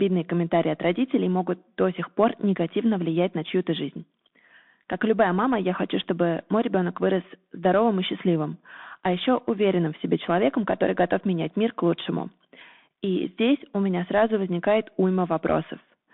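Right from the start the speech runs through a Bluetooth CVSD headset codec, squeezed to roughly 150 Hz–3.6 kHz, with scratchy s sounds, granular hiss and slope-overload grit, which fits a 64 kbps one-bit stream.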